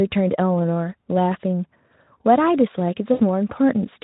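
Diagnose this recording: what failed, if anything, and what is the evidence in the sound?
The network stage failed: packets went missing and the decoder concealed the loss as VoIP packet loss concealment, from 3.13 to 3.21 s. The gap is about 60 ms, which fits three 20 ms frames. Over it the Speex decoder, running at 15 kbps with light coding damage, stretched its last pitch and filter into a buzzy tone or coloured noise that fades as the gain steps down frame by frame. On a spectrogram this shows as flat, smeared harmonics thinning out. The waveform shows a repetitive, decaying envelope, and the sound stays weak briefly after packets resume.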